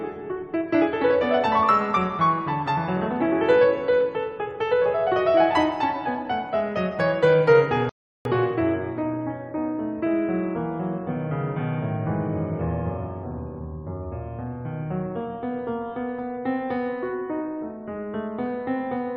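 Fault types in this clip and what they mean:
Playback stall: at 7.89 s the music cuts out mid-phrase and stays silent until 8.25 s, a gap of about 0.36 s, before carrying on. This is likely the player running out of data or its thread being blocked, leaving the output empty until recovery.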